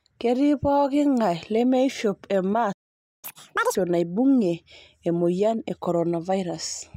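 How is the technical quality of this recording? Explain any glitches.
The recording has two linked glitches in the speech, both in the middle of the clip.

At 2.72 s the speech cuts out into silence for about half a second, resuming at 3.25 s. This playback stall is likely the player running out of buffered data or having its thread blocked, so nothing reached the output until it recovered.

From 3.25 to 3.75 s the speech runs at double speed and jumps sharply in pitch, roughly ten semitones higher, before dropping back to normal. This is catch-up at higher speed: the player resampled its backlog to win back the time lost in the stall.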